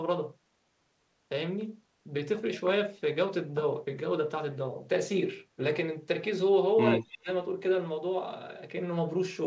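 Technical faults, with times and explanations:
6.97–7.29 s, speech suppressed in double talk: the level dips by roughly 30 dB for about 0.3 s. The likely cause is the echo canceller muting both overlapping talkers. This shows as a waveform notch and a faded spectrogram band.
7.12–7.18 s, echo leak: a faint copy arrives 178 ms late, about 20 dB down. This is likely residual loudspeaker echo, seen as a weak, delayed repeat of the harmonic striations.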